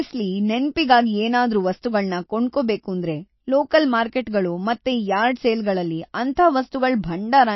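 Throughout the speech, nothing is present above 5.8 kHz, and the remaining band has a watery, swirling quality with smeared onsets. This is likely MP3 compression at a low bitrate, which fits roughly 27 kbps: the encoder cuts the treble and drops weak frequency lines that flicker from frame to frame.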